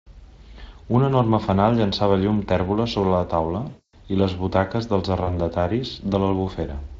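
Just after "tèrbola sobre la taula", from 3.69 to 3.94 s, there's VoIP packet loss concealment: a quarter-second gap the Speex decoder fills by stretching the last sound into a fading buzzy tone or coloured noise. A shorter 40 ms patch hits at 5.23 s, shortly after "i les butaques dels".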